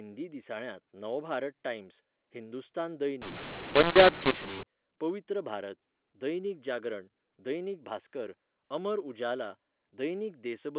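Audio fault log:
3.22–4.63 s, mu-law and A-law mixed up: after "दिसाळ्यांत नवभारत टाइम्स हिंदुस्तान", A-law samples decoded as mu-law scramble levels, making speech harsh and lifting quiet samples into noise.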